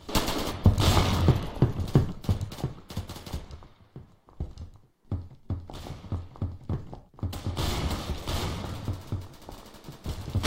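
At 1.32 s everything drops about a semitone flat and runs 5.7% slow until 1.85 s, then from 8.65 to 10.06 s it goes about a semitone sharp and 5.7% fast. That's likely a drift correction step, with clock-matching software briefly jumping the playback rate to fix its buffer.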